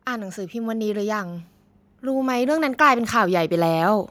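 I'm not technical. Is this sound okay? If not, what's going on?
No, not quite. From about 0.05 s right through to 4.06 s, the whole recording slowly gets louder. That's automatic gain rising: the recorder decided the input was too quiet and kept turning itself up bit by bit. Because it boosts everything it hears, the speech and the background noise behind it swell together, so by the end the background sounds louder than at the start.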